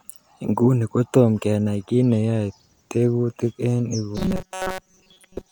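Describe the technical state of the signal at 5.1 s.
At 5.1 s the speech has robotic sound from repeated short buffers, running from 4.17 s after "tekutik en" to the end. Most of the sound is a rigid, metallic buzz fixed at 188 Hz, likely from a roughly 5 ms buffer being replayed. Unlike a pitch shift, that pitch stays fixed and doesn't follow the voice.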